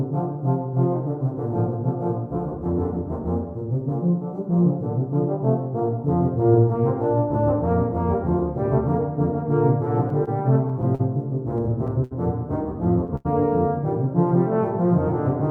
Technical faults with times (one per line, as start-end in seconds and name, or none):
10.24-10.29 short stall from a late packet
10.95-11.01 short stall from a late packet
11.57-12.13 repeated stalls (stutter)
13.16-13.27 short stall from a late packet